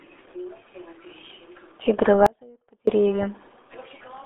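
From the start, the speech has passed through the RealAudio 14.4 codec, a dial-up era coder whose sound fits a rate of about 8 kbit/s. Nothing above 3.8 kHz survives, and the band runs only from about 250 Hz to 3.6 kHz, so the speech is muffled, gargly and heavily damaged throughout.

At 2.26 s the signal path likely lost its feed while staying live, producing an audio dropout to a faint residue. For about 0.61 s, until 2.87 s, the speech cuts out abruptly, leaving only a faint trace roughly 30 dB below its normal level before it snaps back.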